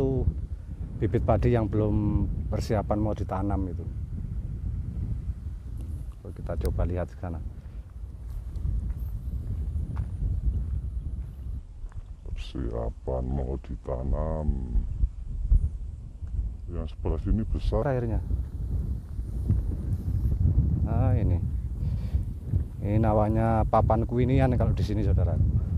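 From 11.58 to 17.82 s the audio drops to a slower, deeper sound, a section at the wrong speed running at 0.77x, about five semitones low, likely from playback on a mismatched clock.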